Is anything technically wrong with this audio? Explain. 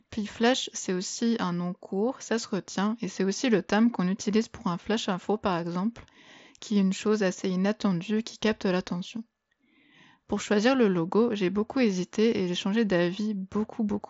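No, nothing's wrong here; it's just speech coming through a Bluetooth mSBC headset link, so the top end stops at about 7.7 kHz and louder moments carry a faint grain, both normal for that codec.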